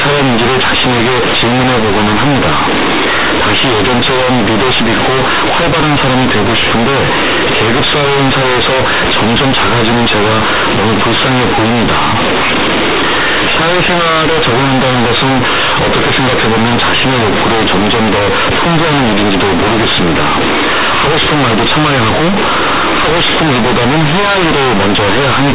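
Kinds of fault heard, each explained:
Companded audio read as linear: the A-law telephone bytes are being played straight as plain 8-bit samples, never expanded back out. The sign-and-magnitude code means every zero crossing flips the output across roughly half its range, so quiet passages land as loud as the peaks and the waveform gets badly bent. Here it runs the whole way through the speech as harsh, buzzy, overloud distortion, with heavy noise filling the pauses, all sitting inside the usual 4 kHz telephone band.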